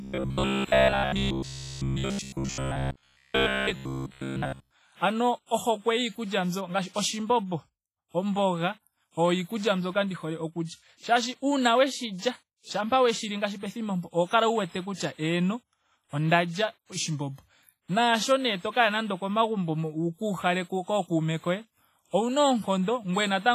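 Robotic sound from repeated short buffers, from 0.02 to 4.71 s: the speech becomes a rigid metallic buzz at 66.7 Hz, likely because about 15 ms chunks were repeated in place of most of the real audio.

WMA compression runs throughout: heavy washy ringing and signal-following hiss, likely from a low-bitrate transform encoder, which fits roughly 24 kbps.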